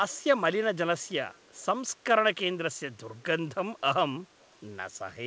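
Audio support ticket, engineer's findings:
Echo leak, 1.34 to 1.62 s: very faint delayed repeat of the speech, 240 ms behind, brief scrap only. Likely far-end loudspeaker pickup not fully cancelled by AEC. Discrete fixed-lag copy, not reverb's smeared tail. Band-limited at 8 kHz through the G.722 path.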